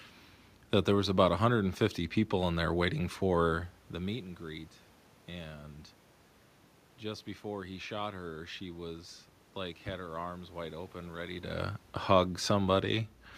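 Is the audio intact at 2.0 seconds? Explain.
Yes, the speech is intact at 2.0 seconds, with only the normal smooth level changes and the room noise sitting about 35 dB below the speech.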